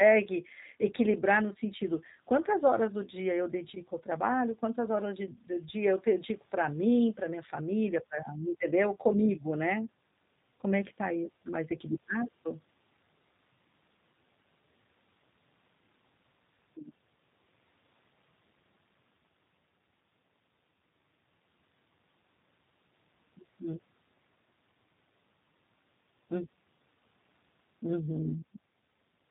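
Throughout the speech, G.729 codec damage is plainly audible: nothing passes above about 3.8 kHz, and the voice is rebuilt from a filter and sparse pulses, which fits 8 kbit/s. Unlike simple band-limiting, it also sounds rough and slightly synthetic.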